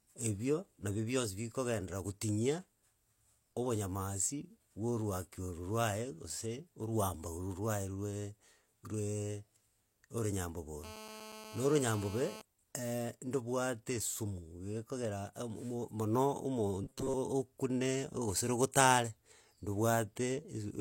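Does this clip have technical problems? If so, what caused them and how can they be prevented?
Yes. Three faults can be heard.

Low-bitrate audio saved at a high bitrate runs through the whole clip. The speech has the smeared, swirly texture of heavy compression, and nothing is present above 16.3 kHz. That points to a low-bitrate source, perhaps around 32 kbit/s, that was later saved as a large, high-bitrate MP3. This is the likely cause. The second encoding cannot restore detail the first one threw away. To prevent it, keep and re-export the original high-quality source instead of re-encoding a compressed copy.

GSM phone buzz appears from 10.84 to 12.42 s. It is a hard, raspy buzz at 217 Hz, rich in harmonics, sitting about 14 dB below the speech. It stays steady throughout, which fits a 2G phone on an active call nearby. The phone sends radio bursts 217 times a second. The audio circuitry rectifies those pulses into an audible tone. 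To prevent it, keep mobile phones switched off or well away from microphones and recording gear.

Robotic sound from repeated short buffers occurs from 16.84 to 17.14 s. The speech turns into a rigid, metallic buzz at 133 Hz, and most of the real audio in that stretch is lost. The likely cause is that fresh audio arrived too late. The software kept replaying a fragment of about 7.5 ms to fill the gap, and that repetition forced the fixed pitch. To prevent it, use larger buffers and a stable, unloaded processing chain.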